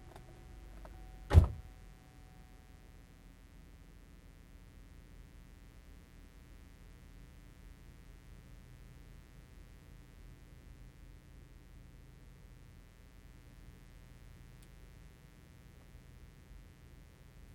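A steady, raspy buzz runs underneath the sound from start to finish, sitting roughly 25 dB below it. This is mains buzz: sharp switching spikes entering twice per 60 Hz cycle, spreading harmonics of 60 Hz up into several kilohertz.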